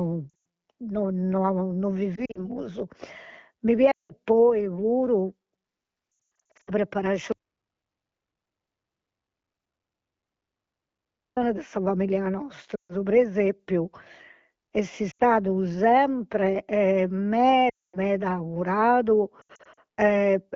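Brief warbles and stretches that quickly drop to near silence at 0.30 s, 2.16 to 2.47 s, 3.91 to 4.12 s and 6.16 to 6.71 s are lost AMR speech frames. Corrupted frames forced the wideband decoder to repeat its last pitch and vocal tract settings at falling gain, with about 380 ms missing in the 6.16 s stretch. From 7.32 to 11.37 s the sound cuts to total silence with no room tone, an audio dropout to silence lasting about 4 s, likely from the input being lost while silence kept being written. The same concealment, dropping to near silence, returns at 12.75 to 12.96 s, 15.11 to 15.22 s, 17.69 to 17.98 s and 19.41 to 19.80 s.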